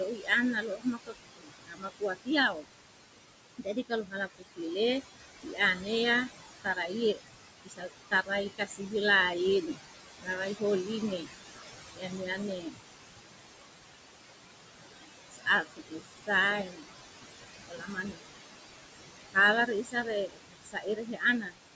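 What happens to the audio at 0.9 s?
At 0.9 s the speech is being cut by the noise suppressor, within a stretch from 0.09 to 2.75 s. The suppressor misreads parts of the speech as steady noise and pulls those bands down with the background, by about 22 dB at the deepest, over roughly one and a half seconds in total. Soft consonants and word endings come out swallowed or faint.

Noise suppressor artifacts run under this moment as well. The background is lowered by about 20 dB between words and rises again beneath the speech.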